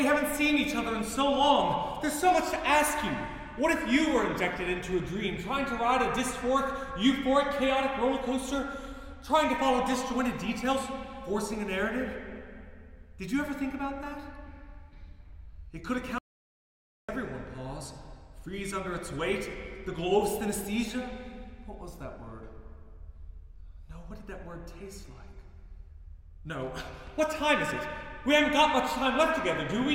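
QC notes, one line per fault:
16.18–17.09 s, audio dropout to silence: the sound cuts out mid-flow for 0.9 s with no room tone left, likely from a lost input while zeros kept being written. The waveform drops to a flat line and the spectrogram shows an empty gap.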